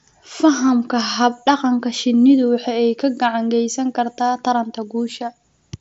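No technical faults can be heard in this speech.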